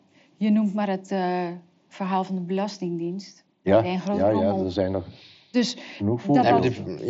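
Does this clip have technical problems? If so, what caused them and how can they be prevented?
No, there are no technical problems to fix in this speech recording. It carries the character of a Bluetooth mSBC headset codec working as intended, with nothing above about 7.7 kHz and a light grainy texture on the louder sounds.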